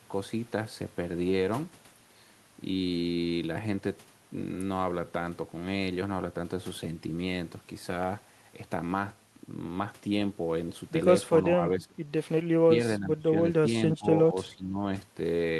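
Between 11.54–12.02, 12.99–13.37, 13.98–14.07 and 14.3–14.86 s the speech sinks by roughly 10 to 25 dB, deepest in the first, likely speech suppressed in double talk as an echo canceller turned down overlapping talk.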